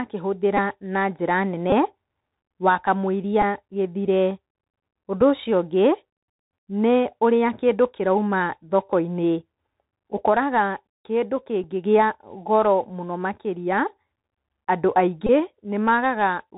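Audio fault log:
throughout: Bluetooth CVSD headset codec. The one-bit delta coding, which fits a 64 kbps stream, leaves nothing above 4 kHz, scratchy sibilants and a granular hiss; a spectrogram shows a hard ceiling at 4 kHz with grainy noise filling the speech band.
0.57, 1.70–1.73, 3.42, 5.21, 11.64, 15.27–15.30: Bluetooth headset packet repeated. Lost stretches of 3.8 to 22.5 ms were refilled by repeating the previous packet; longer runs buzz near 267 Hz, single ones tick. Waveforms show short identical repeating segments, spectrograms narrow vertical lines.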